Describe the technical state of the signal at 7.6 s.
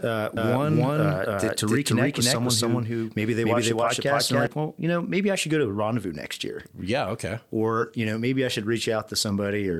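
At 7.6 s the speech is intact, with no dropout, distortion or other fault at that point.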